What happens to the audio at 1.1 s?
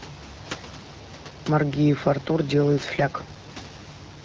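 Nothing goes wrong at 1.1 s: the speech carries on intact through that moment, with no dropout, click or distortion.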